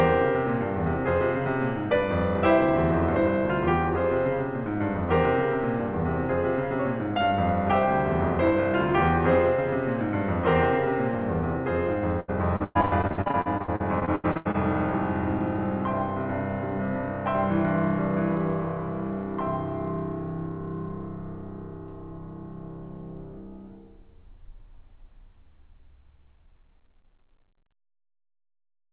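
Between 12.2 and 14.56 s, repeated packet loss produces robotic sound: gaps up to 111 ms are filled by extending earlier audio, leaving the music choppy with pieces missing.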